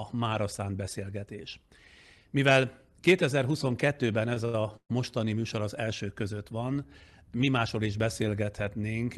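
Speech, carried over a call link whose top end stops near 12 kHz, consistent with Opus. Two short stalls from late packets sit close together. The first runs from 4.34 to 4.37 s, with about 17 ms of sound held over. The second runs from 4.45 to 4.55 s and stretches the sound by 85 ms. Each time, a packet was late and the jitter buffer ran dry. The receiver held the last sound until the packet came. Then it resumed at the same spot, so nothing is lost, only drawn out. A call audio freeze follows from 4.77 to 4.91 s. The sound is held and fades for about 130 ms, including roughly 50 ms of silence. Then it picks up again where it stopped. The likely cause is packets delayed in transit, which emptied the jitter buffer. The result is a gap inserted into the audio rather than missing sound.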